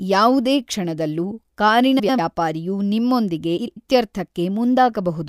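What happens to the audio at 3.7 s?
Just after "ಕ್ಷಣದಲ್ಲೂ ಕಾರಿನ ವ್ಯಾಪಾರಿಯು ನಿಮ್ಮೊಂದಿಗೆ", from 3.58 to 3.77 s, frames arrive out of order. Two neighbouring 96 ms blocks, consistent with runs of four frames each, are decoded in swapped sequence, so the speech there plays with its halves exchanged and sounds like a garbled flutter. No time is lost. A spectrogram shows formant tracks jumping abruptly at those seams, and the waveform shows discontinuities there.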